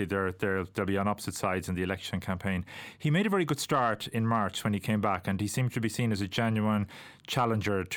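No technical faults occur in the speech at any point, so there are none to describe.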